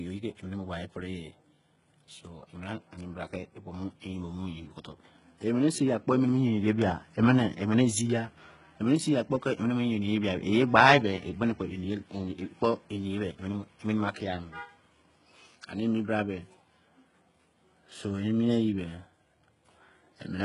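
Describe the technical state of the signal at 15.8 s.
At 15.8 s you're hearing the same damage that runs through the whole clip, heavy HE-AAC compression most likely, something around 12 kbps. The treble is rebuilt from copied lower bands, so s sounds turn gritty and lispy, and nothing survives above about 11.1 kHz.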